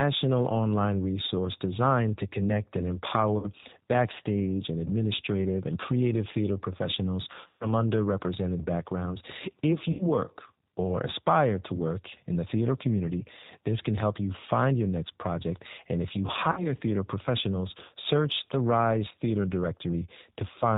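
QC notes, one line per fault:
Throughout: G.729 codec. The speech has a plainly audible rough, slightly synthetic quality with nothing above 4 kHz, which fits G.729A at 8 kbit/s. The decoder rebuilds each 10 ms frame from a vocal-tract filter, a pitch predictor and a handful of pulses, so fine detail and breathiness are lost and the voice comes through thin and rough-edged while staying intelligible.
3.38–3.49, 7.48–7.67, 9.91–10.03, 16.52–16.74 and 19.1 s: VoIP packet loss concealed by the speech codec. At each point the speech smears into a stretched, buzzy tone or coloured noise that fades, longest at 7.48 s, where about 130 ms of audio is missing. The decoder fills each gap by repeating its last pitch and filter at falling gain. Because each frame builds on the one before, the voice stays weak or distorted briefly after each gap.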